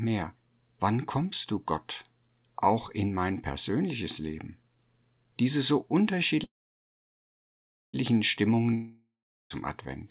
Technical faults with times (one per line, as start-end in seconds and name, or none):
6.44-7.96 call audio freeze
8.74-9.53 long network dropout